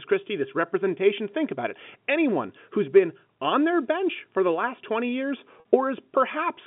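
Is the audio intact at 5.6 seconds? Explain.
No. From 5.6 to 5.65 s there is packet loss with pitch repetition. About 50 ms of audio went missing, and the receiver filled the gap by looping the last pitch period, so the sound briefly holds as a slightly buzzy, sustained tone.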